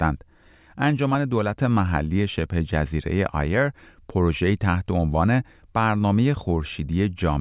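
No technical faults are audible.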